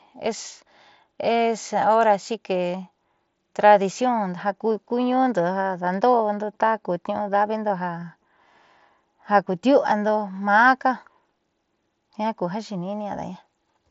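Speech with a brief concealed Bluetooth headset packet loss at 8.01 s, a gap of about 7.5 ms that points to one lost frame, patched with recycled waveform rather than silence, so it passes as a tiny smear instead of a click or dropout. The mSBC headset codec underneath adds light graininess.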